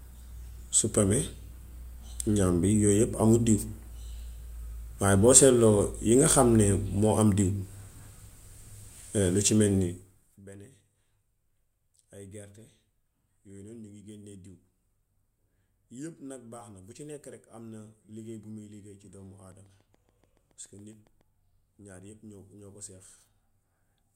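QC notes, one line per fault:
19.52–21.22 s, train of clicks: a regular ticking at about 7.1 clicks per second, some fifteen pulses of near-identical shape, each peaking roughly as loud as the speech itself, and they carry on through any gaps. Short impulses repeating at a steady rate point to something periodically injecting energy into the signal path, likely interference from nearby equipment or a faulty connection or power supply.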